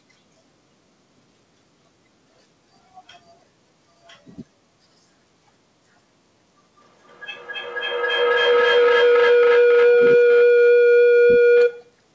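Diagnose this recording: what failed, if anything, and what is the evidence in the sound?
From 6.8 s to 12.07 s, a ringing tone near 500 Hz swells to about 18 dB above the speech, pulsing roughly every third of a second. This is feedback howl in the call path: two devices in one room recapture each other's loudspeaker output and gain level on every trip around the loop.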